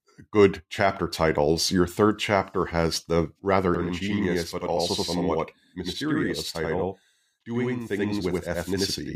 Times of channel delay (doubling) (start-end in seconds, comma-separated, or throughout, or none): 3.74-9.15